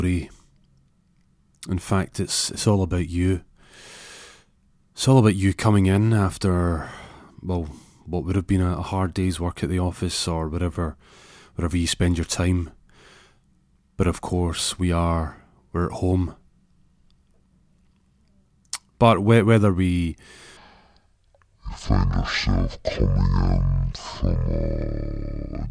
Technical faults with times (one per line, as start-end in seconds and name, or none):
20.57-25.70 wrong sample rate